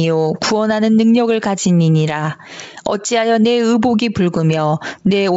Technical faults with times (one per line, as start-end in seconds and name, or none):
0.00-5.37 gain pumping
0.58-5.16 clock slip clicks